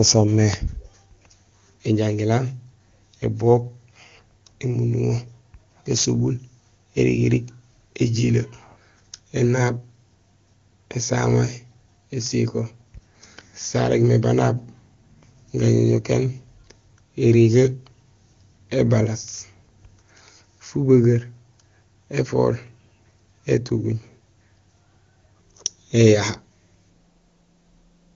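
No technical faults can be heard anywhere in this speech recording. It has passed through the AMR wideband (HD Voice) codec, and the sound stays clear, with at most a faint trace of coding, which fits one of its top rates, around 23.85 kbit/s.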